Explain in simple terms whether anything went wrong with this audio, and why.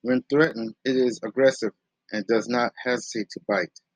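From 0.44 to 0.51 s, just before "it is aggressive and", the speech suddenly gets quieter, likely because one channel drops out.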